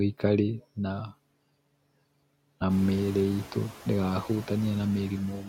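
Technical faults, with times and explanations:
Throughout, noise suppressor artifacts: the suppressor cuts the bands it treats as steady noise by about 18 dB, frame by frame, so the background sinks in the gaps between words and returns under them. The room noise behind it rises by about 15 dB around 2.5 s.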